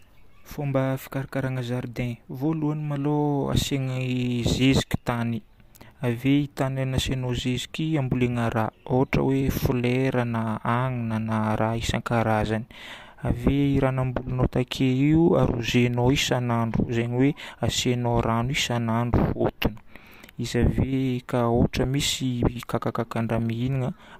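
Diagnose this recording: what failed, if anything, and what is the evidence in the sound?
Nothing failed: no stage in the chain, from wiring and conversion through buffering, codec, transport and storage to playback, leaves any audible mark anywhere in the speech.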